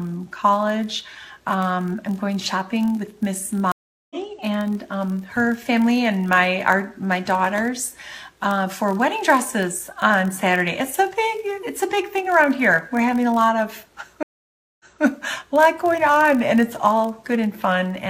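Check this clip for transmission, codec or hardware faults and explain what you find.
Three faults are audible: a continuous block size mismatch and two stream reconnects.

Block size mismatch (padded), throughout: one stage writes slightly shorter blocks than the next reads, which fits 1024-sample blocks. The zero-filled gaps produce a 43.1 Hz buzz, and the audio runs at 0.999x speed.

Stream reconnects, at 3.72–4.16 s and 14.23–15.03 s: each time the connection dropped and the player restarted its decoder mid-stream. The first gap is 385 ms of silence, after which the audio resumes roughly 200 ms further on. The second is 568 ms of silence, then the audio resumes 232 ms earlier, repeating a short stretch.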